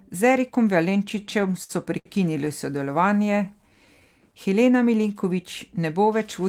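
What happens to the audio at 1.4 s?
At 1.4 s the speech drags and stutters, catching on itself eight times between 1.09 and 2.07 s. These are repeated stalls (stutter): packets arrived too late, the jitter buffer kept emptying, and the receiver stretched the last sound for about 180 ms in all, at most 62 ms per gap, with nothing lost.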